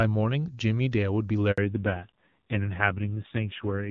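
A speech recording that begins as a clean wideband call, its voice carried by the AMR wideband (HD Voice) codec with no more than faint codec damage at a rate that fits 23.85 kbit/s, is interrupted by a handover gap from 1.52 to 1.58 s. The voice dies away and 60 ms of silence follows as the call switches networks and no speech frames arrive. Unlike a dropout or packet-loss glitch, where concealment smears or repeats the preceding sound, this is a clean silence followed by a change in the character of the voice. From 1.58 s to the end, a fallback to narrowband removes everything above 4 kHz. The voice turns dull and muffled, and the loss of sibilance and airiness fits a drop to AMR narrowband at about 5.9 kbit/s, which also adds a rough, buzzy texture. That combination sets it apart from a simple low-pass filter or from wideband codec artefacts, which keep the upper band up to about 7 kHz.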